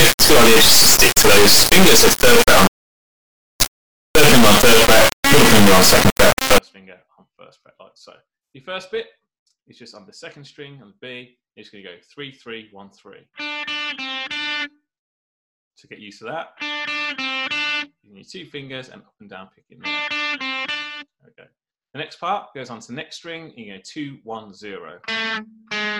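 From 0.0 to 6.58 s the audio shows an integer read as float fault, consistent with 32-bit integer samples being decoded as 32-bit floats. The reinterpreted values snap between near-zero and the clipping limit, producing a harsh, extremely loud square-wave buzz that collapses to silence wherever the sound is very quiet.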